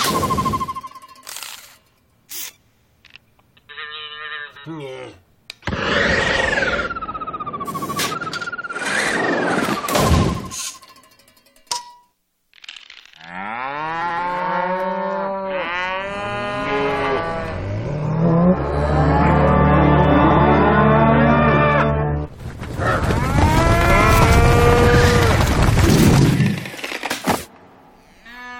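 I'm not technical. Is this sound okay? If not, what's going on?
No. There are two kinds of fault in this audio.

The first is a dropped buffer (overrun), heard at 0.92 s and again at 25.56 s. At each point the sound jumps forward with no gap, skipping roughly 40 ms the first time and about 70 ms the second. The likely cause is that the recording program fell behind and the hardware wrote over audio it had not yet saved, so that piece is simply missing.

The second is frames out of order, at 4.47 s, 6.20 s, 8.14 s, 14.01 s, 20.24 s, 22.43 s and 25.89 s. Each time, two short neighbouring pieces of sound play in swapped order, each about 85 ms long, except at 20.24 s, where they are about 64 ms each. The result is a brief garbled flutter. Nothing is lost; it is just played in the wrong sequence.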